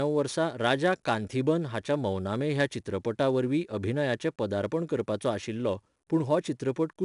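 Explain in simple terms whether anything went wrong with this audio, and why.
4-bit ADPCM compression runs through the whole clip: each sample is squeezed into a tiny coarse step, leaving gritty hiss on louder speech, and nothing above 10.6 kHz.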